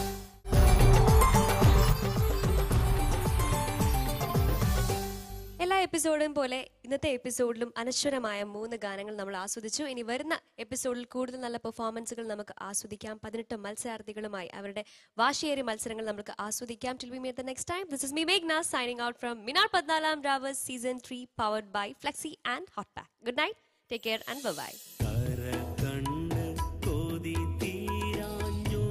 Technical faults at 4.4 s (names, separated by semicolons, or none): one channel drops out